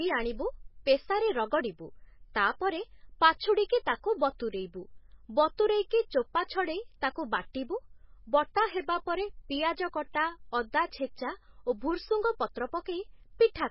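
MP3 compression runs throughout the speech. Nothing reaches above 5.6 kHz, and the sound is heavily watery and swirly, with smeared attacks. The likely cause is an MP3 encode starved of bits, around 16 kbps, cutting the treble and flickering weak frequency lines between frames.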